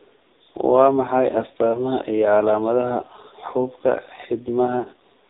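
AMR narrowband mobile codec throughout: the speech is band-limited below 4 kHz and sounds heavily buzzy and synthetic, which fits a very low bitrate near 5.9 kbps. Lost AMR speech frames at 1.72 to 1.91 s and 4.80 to 4.87 s: the decoder reused its last pitch and vocal-tract settings at falling gain, giving a brief dip and warble, the first consistent with one dropped frame and the second with two.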